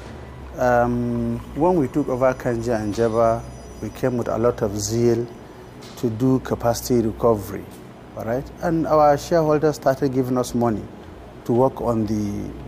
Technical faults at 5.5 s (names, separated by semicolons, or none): none